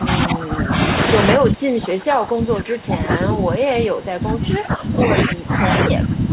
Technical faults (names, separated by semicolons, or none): speech suppressed in double talk